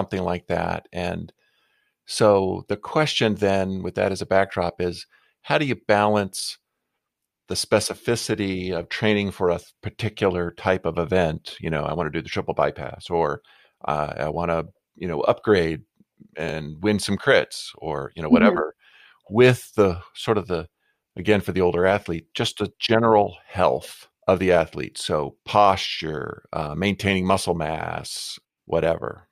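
Tiny skips jump the sound forward at 4.50 s, between "with that as a" and "is how do you", at 10.50 s, between "training for a particular" and "type of event", and at 16.49 s, just before "win some crits or". Each loses only a few milliseconds, and they fall every 6 s. This is likely audio missing between chunks: a sliver dropped each time one chunk closed and the next opened, with the two sides butted together.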